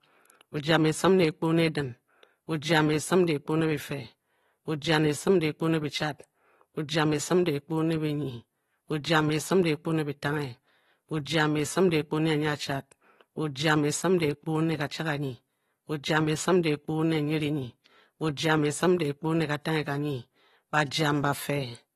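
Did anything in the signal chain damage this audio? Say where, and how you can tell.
Yes, likely AAC compression at the codec stage: the speech sounds dull and smeared throughout, with nothing above 12.4 kHz, which fits a low bitrate of around 37 kbps.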